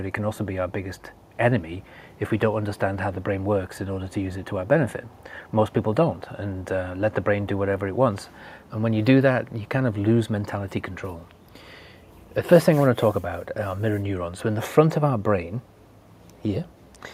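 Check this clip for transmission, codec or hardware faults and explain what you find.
No transmission or hardware faults can be heard anywhere here.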